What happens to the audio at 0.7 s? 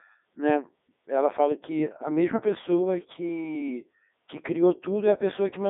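At 0.7 s, like everywhere else in the clip, you're hearing the Codec 2 vocoder. It runs the whole way through. The decoder isn't passing the original waveform at all. It rebuilds the speech from sine waves using just pitch, voicing, energy and a rough spectral envelope, so it comes out robotic and buzzy, with heavy damage. The band sits around 200 Hz to 3.7 kHz, with nothing above 3.8 kHz, which fits the 3.2 kbit/s mode.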